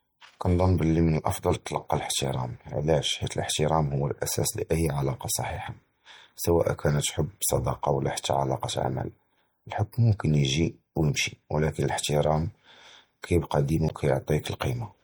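Across the whole speech clip the sound is watery and swirly, likely from MP3 compression, which fits a rate near 64 kbps. Short bit budgets cut high frequencies and flicker weak components. At 13.86 to 13.91 s, damaged data in the compressed stream causes a brief glitch. The decoder misreads those frames and resynchronises.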